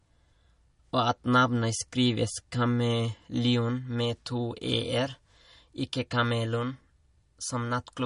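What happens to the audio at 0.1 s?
At 0.1 s, as throughout the clip, the speech carries plainly audible damage, likely from MP3 compression. Nothing sounds above 10.6 kHz, so the treble is cut off. Weak frequency lines switch on and off between frames. That gives a watery, swirly sound and smeared attacks, which points to a low bitrate.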